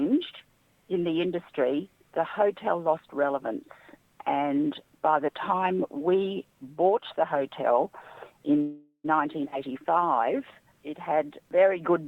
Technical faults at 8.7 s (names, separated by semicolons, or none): call audio freeze